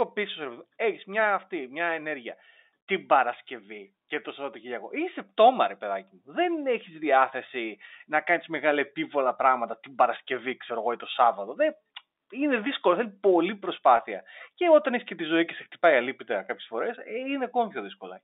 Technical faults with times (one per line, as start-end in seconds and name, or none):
13.97-13.99 packet loss with pitch repetition